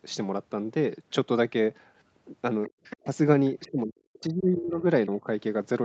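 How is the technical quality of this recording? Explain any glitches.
The recording has two distinct faults from a call with an imperfect echo canceller, with the whole band stopping at 8 kHz, consistent with a roughly 32 kbps Opus link.

Other side's voice leaking through, 2.84 to 2.97 s: a scrap of a second voice about 15 dB below the talker, likely residual loudspeaker echo the canceller missed. On a spectrogram it appears as faint, separate harmonic traces.

Speech suppressed in double talk, at 3.0 to 3.09 s, 3.56 to 4.84 s and 5.09 to 5.27 s: the talker's voice dips, by roughly 25 dB, then up to 40 dB, then only slightly. This is likely the canceller ducking everything during overlap. The waveform shows carved-out notches in the envelope.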